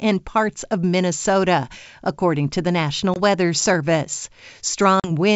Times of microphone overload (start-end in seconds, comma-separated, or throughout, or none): none